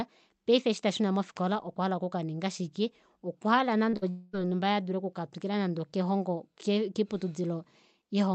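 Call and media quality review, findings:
Short concealed packet loss at 3.89–3.95 s, just after "hala okukaninga shike okwahala". Brief smear in the speech. Receiver-side concealment. About 40 ms of audio never arrived in time, so the decoder extended the preceding sound and blended back into real audio.

Burst of packet loss at 3.97–4.04 s, between "hala okukaninga shike okwahala" and "yonhumba yee adule oku". Held, fading tail, then speech resumes further on. Jitter buffer and concealment. Several consecutive packets went missing. About 47 ms was synthesised from the last sound and turned down.

Long network dropout at 4.10–4.35 s, just before "yonhumba yee adule oku". A quarter-second of buzz or hiss that decays without falling to silence. Likely a network outage upstream of the jitter buffer. Roughly 234 ms was filled by concealment, and that span of real speech is lost.

The Opus call path bands the speech to 8 kHz, and the codec noise points to a bitrate around 40 kbps.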